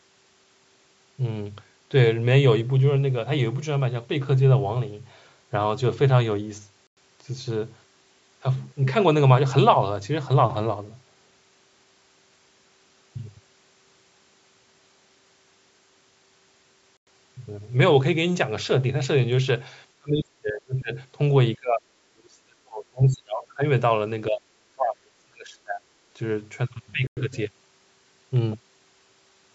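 At 6.87 s and 16.97 s, a gap between chunks leaves 100 ms of silence, spaced at the 10 s chunk length. From 19.97 to 25.84 s the speech dips in pieces, at 19.97–20.92, 21.56–21.86, 22.10–23.64, 24.29–24.42 and 24.75–25.84 s, by roughly 20 to 40 dB. This is likely speech suppressed in double talk, with the echo canceller ducking the near talker along with the far-end echo. A third 100 ms gap between chunks follows at 27.07 s.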